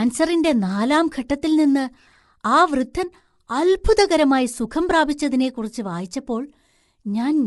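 From start to finish the speech has a rough, grainy texture, with a hiss-like fuzz filling the gaps between the pitch harmonics, and nothing at all comes through above 11.6 kHz. That points to low-delay AAC compression, likely AAC-ELD at a low rate, something around 32 kbps. Its very short frames can't separate the harmonics cleanly and leave too few bits to go round, so the damage is plainly audible throughout.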